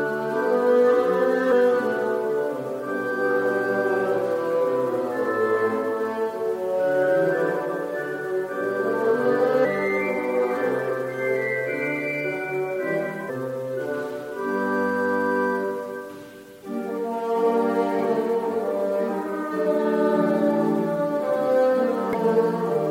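The audio carries four brief blips from damaged data in a compressed stream, at 1.51 s, 9.64 to 9.66 s, 13.28 s and 22.13 s, each lasting around 20 ms. At each point part of the encoded data was corrupted or lost, so the decoder misread the affected frame and lost sync until it found the next valid frame header. That failure is heard as a short disruption.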